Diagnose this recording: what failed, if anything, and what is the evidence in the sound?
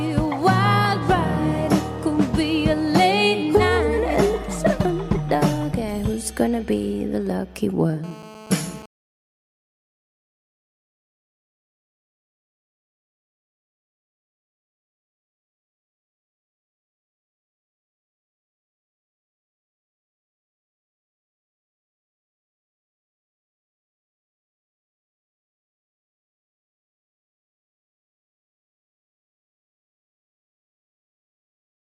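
GSM phone buzz, 8.04 to 8.86 s, analogue wiring: rectified phone call bursts produce a steady, raspy 217 Hz buzz, about 20 dB below the signal.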